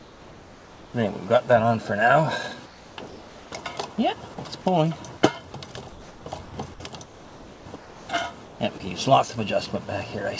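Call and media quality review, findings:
Comfort noise in place of the background at 0.0–0.94, 2.66–3.52, 5.90–6.54, 7.04–8.08 and 8.44–8.80 s. Real background, about 24 dB below the loud parts, turns into steady, featureless hiss, about 3 dB quieter in the first stretch. Likely cause: sender DTX during pauses, with receiver-generated noise filling the gaps.

Sound dropped by the voice detector at 8.78–8.80 s, inside the last comfort-noise stretch. About 10 ms of sound lost, with flat noise in its place. Likely cause: the sender's detector took the sound for background and stopped sending. Nothing above 8 kHz, as expected for G.722 at 64 kbps.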